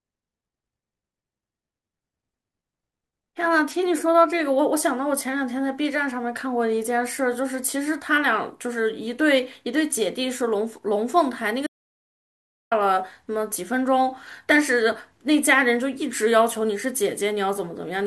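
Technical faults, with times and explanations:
11.67 to 12.71 s, audio dropout to silence: the speech cuts off mid-flow into about a second of silence with no room tone, likely from a lost input while recording continued.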